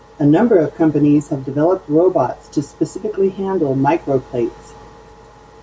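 Throughout the speech, the level swings by around 5 dB. Loud and quiet passages sit unnaturally close together, giving a squashed, pumping feel. This is gain pumping, likely from input gain set far too high with a fast limiter or compressor clamping down on every peak. The room noise underneath sits about 44 dB below the speech.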